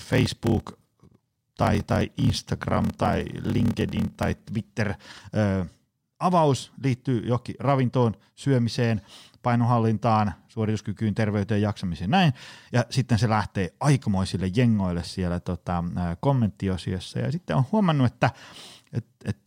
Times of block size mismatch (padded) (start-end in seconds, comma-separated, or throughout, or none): 0.00-4.48